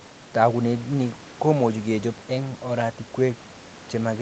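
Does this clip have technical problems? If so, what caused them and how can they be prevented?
No, no technical faults heard.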